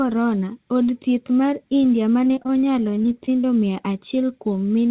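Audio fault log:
2.24–3.45 s repeated packet loss (robotic sound): gaps of up to 20 ms keep recurring, each patched with repeated sound, so it sounds choppy with pieces missing rather than cutting out once.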